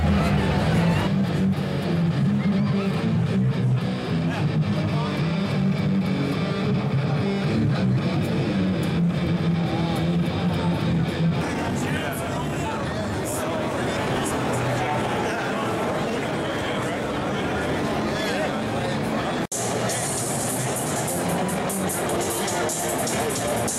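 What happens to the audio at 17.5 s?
Nothing goes wrong at 17.5 s; the audio there is intact, with no dropout, click or other fault.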